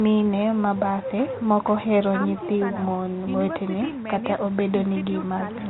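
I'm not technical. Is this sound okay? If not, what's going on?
Yes, this sound is okay, and nothing is going wrong with it.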